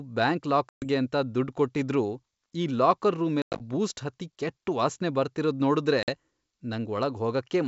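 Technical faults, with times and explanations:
0.69–0.85 s, 3.42–3.62 s and 6.03–6.10 s, packet loss on an ADPCM call: sharp silent holes of about 130 ms, 140 ms (scattered, longest gap 100 ms) and 50 ms. Afterwards the speech comes back with brief distortion, because the decoder's adaptive prediction and step size have drifted from the sender's and need a few tens of milliseconds to realign. The wideband G.722 coding around the gaps stays clear.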